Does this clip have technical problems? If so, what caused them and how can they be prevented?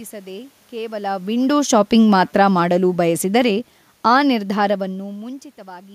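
Yes. From 2.2 to 4.88 s the automatic gain control judged the input too loud, or its background noise too strong, and gradually lowered its gain by about 6 dB. This automatic gain falling acts on everything the microphone picks up, so the speech and the room noise behind it sink together over those seconds. That shared drop is different from the talker moving around 1 s and again near 4.5 s, where only the voice changes level. To prevent it, set the input level low enough that the gain control never starts reducing, or switch it off and fix the gain by hand.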